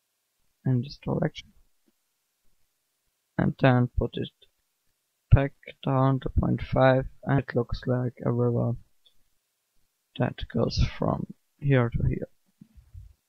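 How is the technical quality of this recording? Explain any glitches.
Two short glitches from damaged data in a compressed stream, at 1.35 to 1.41 s and 7.34 to 7.39 s: corrupted frames throw the decoder out of sync, leaving brief blips.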